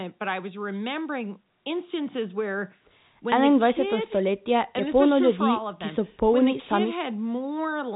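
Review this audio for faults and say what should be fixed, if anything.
No faults turn up in this speech audio, so nothing needs to be fixed.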